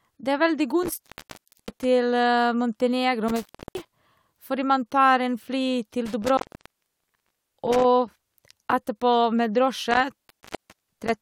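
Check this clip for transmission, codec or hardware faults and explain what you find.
An intermittent contact, a loose cable or plug briefly opening, interrupts the speech four times: 0.83–1.84 s (open about 0.65 s), 3.28–3.92 s (about 0.30 s, just before "fordi man tar en"), 6.06–7.85 s (about 1.17 s) and 9.91–11.22 s (about 0.64 s). Each break starts and ends with scratchy crackle as the connection makes and breaks, with faint hiss in between. That crackle and residual hiss set it apart from a clean digital dropout, which falls to true silence.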